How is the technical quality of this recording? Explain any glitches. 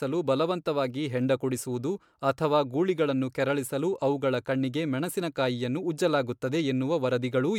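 The recording carries a persistent codec fault across its whole length: generation loss. Throughout, the speech sounds swirly, hollow and smeared, with softened attacks, which likely comes from repeated MP3 encoding, about three passes, in a way that fits 128 kbit/s. Each pass re-quantises on a shifted frame grid, so the artefacts stack. A single encode at that rate would sound cleaner.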